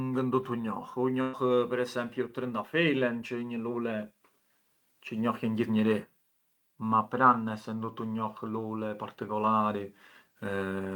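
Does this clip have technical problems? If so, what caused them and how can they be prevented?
Yes. A burst of packet loss from 1.21 to 1.35 s, just before "per esempiu", drops about 120 ms of speech. The receiver stretches the last sound and fades it out, which shows on a spectrogram as a smeared, flattened patch ending in an abrupt jump. Forward error correction or a deeper jitter buffer would help prevent it.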